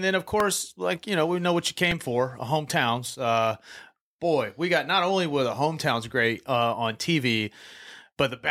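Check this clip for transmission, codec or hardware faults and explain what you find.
Two brief repeated buffer faults occur in this speech. At 0.40 s, between "then of" and "like you know we", a tiny click is heard. At 1.91 s, between "we know what you" and "for hometowns", a short buzz is heard. Late-arriving audio made the device replay its last 1.33 ms block, which fits a 64-sample buffer, once at 0.40 s and four extra times at 1.91 s.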